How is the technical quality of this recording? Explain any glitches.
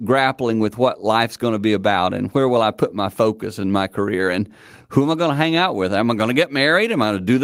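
The technical quality of this recording holds up, with no glitches to explain.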